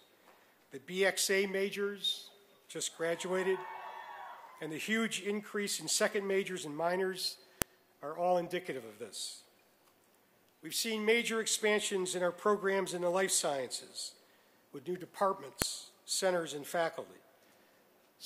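At 7.62 s and again at 15.62 s there is a sharp, loud click, the signature of a file header played as audio. The two events sit exactly 8 s apart, which points to the audio being assembled from 8-second WAV pieces whose headers were never stripped at the joins. Those few dozen header bytes get read as sample values, producing a brief snap that lands regardless of what the surrounding sound is doing.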